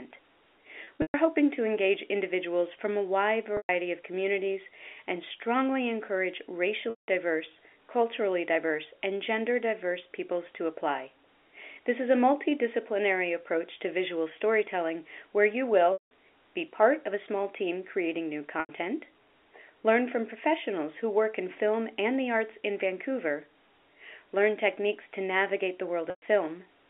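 Packet loss with pitch repetition breaks the speech at 0.84–1.14 s, 3.57–3.69 s (after "individuals from a wide"), 6.90–7.08 s, 15.93–16.08 s, 18.60–18.69 s and 26.10–26.22 s. Gaps of 90 to 180 ms are bridged by repeating the last pitch period. The repetition fades out over about 50 ms, so these gaps fade into silence before the speech returns with a short cross-fade.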